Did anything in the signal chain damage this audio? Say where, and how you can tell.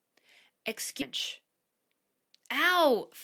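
Yes. At 1.01 s the sound jumps forward with no gap, a skip ahead in the network path: roughly 0.7 s of audio is simply missing and the two sides are butted together. No silence or concealment fills the join, which separates it from a dropout or packet-loss gap. The receiver evidently discarded a backlog that had queued up, pulling the delay down by about the same amount in one step.

From 1.41 s to 2.93 s a jitter buffer speed-up runs the audio at about 110% speed while the pitch stays put. Short pitch-period slices are being cut out repeatedly, around 150 ms in total, to shrink an overfull buffer. Because the pitch does not rise, this is not a sample-rate mismatch or a faster clock, and because it is spread over 1.5 s rather than taken as one jump, it differs from the skip.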